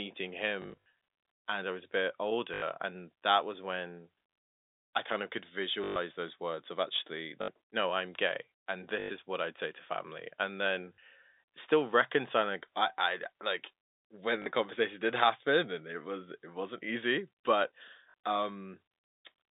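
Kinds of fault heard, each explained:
Packet loss with last packet repeated: missing audio was filled by replaying the previous chunk, which fits 20 ms packets, so losses of 40 to 160 ms, as after "I was a bit", buzz robotically at 50 Hz instead of dropping to silence.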